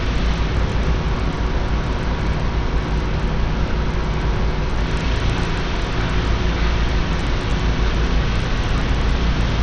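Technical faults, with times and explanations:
Throughout, Bluetooth SBC compression, likely: nothing survives above 9.5 kHz and what remains sounds gritty, which points to a starved bit pool near 80 kbps. On a spectrogram, a hard ceiling at 9.5 kHz with flickering, blocky upper bands and aliasing smear.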